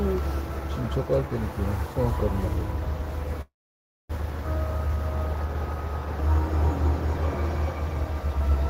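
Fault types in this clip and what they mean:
Call audio freeze: From 3.41 to 4.12 s the sound halts. The last moment continues briefly as a fading buzz, then about 0.6 s of silence follows before the audio resumes exactly where it left off. Nothing is lost, but everything after is pushed about 0.68 s later, likely because delayed packets drained the jitter buffer. On a spectrogram, smeared energy decays into a blank vertical band. The waveform shows a tapering tail and then a flat line.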